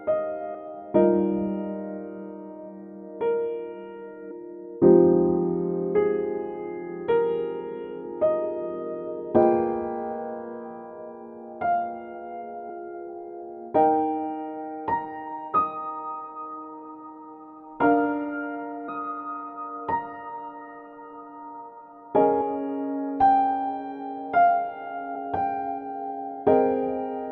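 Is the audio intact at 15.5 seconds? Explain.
No. At 15.53 s compressed frames were skipped. A run of frames, likely about twenty of 26.1 ms each, was missing or rejected by the decoder, so roughly half a second of audio vanishes. The overlapping frames leave a brief smeared blip at the jump.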